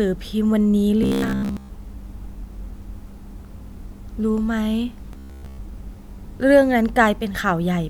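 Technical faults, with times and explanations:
1.03 to 1.69 s and 5.13 to 5.58 s, robotic sound from repeated short buffers: the speech turns into a rigid, metallic buzz at 66.7 Hz that still roughly follows the words. That fixed pitch matches one 15 ms chunk being looped, so the likely cause is audio arriving too seldom, with most of the real sound skipped and replaced by repeats. Unlike dropouts or warbling, the buzz holds one steady pitch whatever the talker does.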